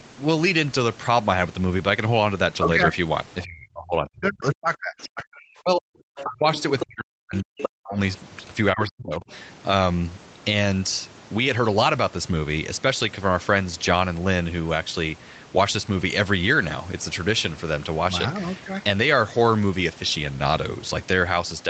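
Speech suppressed in double talk first appears from 3.44 to 6.47 s, likely because the echo canceller could not tell the talker apart from loudspeaker echo while both sides spoke. It pulled the talker down by as much as about 40 dB, and roughly two seconds of that span dip, dull or break into pieces. The same ducking returns at 6.83 to 7.99 s (about a second affected) and at 8.73 to 9.3 s (under half a second).

The other side's voice leaking through overlaps these stretches, at 6.16 to 6.84 s and briefly at 7.58 to 7.69 s. A second voice sits behind the talker's, roughly 10 dB below it in the first span and only about 5 dB below in the second. This is likely residual loudspeaker echo that the canceller failed to strip from the microphone signal. All of it is limited to the 8 kHz band of the Opus call path.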